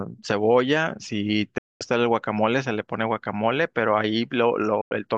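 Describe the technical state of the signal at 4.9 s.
A digital broadcast dropout runs from 4.81 to 4.92 s: the receiver lost valid frames, roughly three judging by the 96 ms gap, and muted until clean data returned. The speech fades out within about 3 ms, leaving a silent hole, then resumes.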